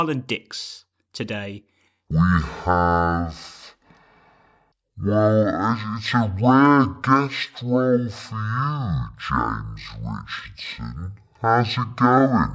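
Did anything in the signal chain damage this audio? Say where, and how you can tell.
Yes, a wrong sample rate at playback: from 2.11 s, just before "I see the tables", speech drops an octave at half speed, fitting 32 kHz audio clocked at 16 kHz. Spectrogram harmonics squeeze downward and waveform cycles stretch to double length.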